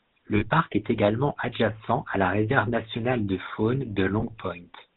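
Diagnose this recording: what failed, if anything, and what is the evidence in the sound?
Codec stage: the GSM full-rate codec gives the speech a buzzy, gravelly roughness throughout, consistent with 13 kbps coding. A spectrogram shows an empty band above 4 kHz.

Network stage: lost GSM frames at 0.36–0.45 s and 4.20–4.24 s are held as a metallic ring. The first loss runs about 60 ms, fitting three frames.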